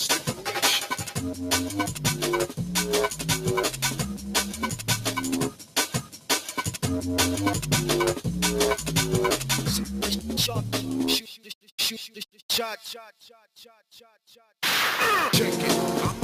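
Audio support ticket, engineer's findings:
Noise suppressor applied to music or sounds, full clip. Speech-tuned suppressor treating steady content as noise. Gain swings around 10 dB; attacks pass, sustains and tails sink, causing pumping. Spectrogram: held partials fade and blotch, decays cut short. Waveform: breathing envelope.

Sound cut by the noise suppressor at 0.19–0.49, 0.92–1.2, 3.72–5.11, 5.5–5.76, 6.02–6.3, 11.21–11.71 and 13.17–13.57 s. Same component wrongly classing the sound as noise. Drops of about 7 to 9 dB. Waveform: envelope notches. Spectrogram: dimmed bands, truncated decays.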